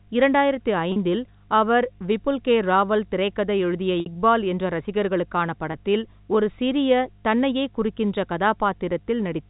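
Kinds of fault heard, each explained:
Mains hum: A ground loop or nearby transformer is leaking the 50 Hz power line into the signal path, so a steady low tone at 50 Hz, with some low harmonics above it, runs under the speech for the whole clip. It sits roughly 30 dB below the speech, and it never changes in pitch or level.
Packet loss with pitch repetition: Audio packets went missing in transmission, and the receiver filled each gap by repeating the last pitch period of the speech rather than leaving silence. The longest gap, about 60 ms at 4.0 s, points to three lost packets, and the speech returns with a short cross-fade. Shorter gaps of 40 ms at 0.92 s and 20 ms at 5.72 s sound like brief smears where a sound is frozen.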